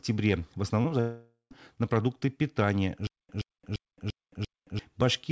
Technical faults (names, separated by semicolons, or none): short concealed packet loss; long network dropout; stutter with silent gaps